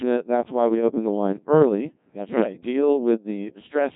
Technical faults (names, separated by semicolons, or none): Codec 2 vocoder